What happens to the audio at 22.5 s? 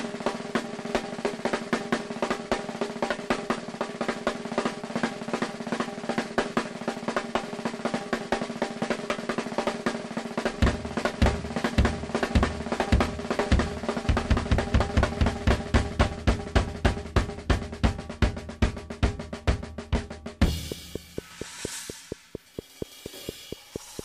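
At 22.5 s the sound is overlaid by a train of clicks running from 20.48 to 24.00 s: around fifteen near-identical pulses at a steady 4.3 per second, peaking roughly 10 dB above the audio. The likely cause is interference or a faulty connection or power supply. The regular spacing and matching shape set it apart from random crackle.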